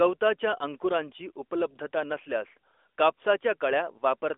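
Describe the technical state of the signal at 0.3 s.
At 0.3 s the signal is intact, with nothing beyond the narrowband character of the AMR mobile codec path it passes through.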